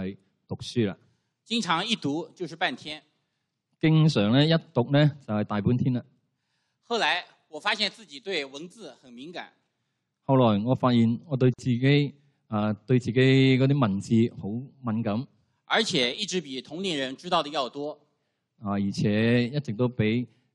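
At 11.54 s the sound drops out and stays silent until 11.59 s, a hole of about 49 ms whose edges are smeared, before carrying on exactly where it left off. This is a gap at a join of encoded pieces: two separately encoded segments were butted together untrimmed, so the encoder's start-up delay and the zero-padding of the previous segment's last frame both survive as dead air at the seam.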